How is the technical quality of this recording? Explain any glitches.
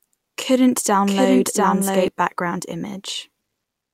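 The recording has one glitch. From the start to 2.08 s, a doubled audio track plays a second, equally loud copy about 0.7 s behind. It is likely from a duplicated capture path. Unlike an echo, the copy never fades and stops abruptly.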